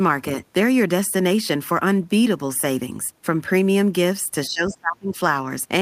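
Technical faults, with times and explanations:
4.48–5.14 s, speech suppressed in double talk: the talker dips hard, by around 25 dB at worst, likely the echo canceller ducking everything while both sides spoke at once.
4.69–4.74 s, other side's voice leaking through: a brief, faint scrap of a second voice, roughly 25 dB under the talker, likely loudspeaker echo the canceller didn't fully remove.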